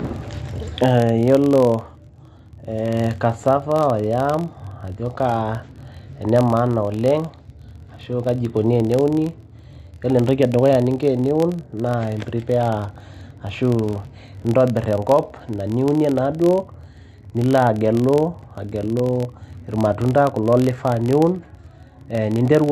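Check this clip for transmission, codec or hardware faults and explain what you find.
One fault runs through the whole speech clip: a filter restarted on every block. Each block starts from silence with a tick. Together they make a 43.1 Hz buzz that fits a 1024-sample block and follows the speech level.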